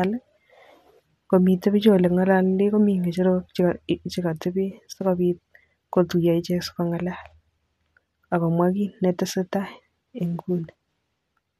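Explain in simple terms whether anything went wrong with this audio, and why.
Nothing went wrong here: the speech in this recording comes across without any glitches, dropouts or other technical hiccups along the way.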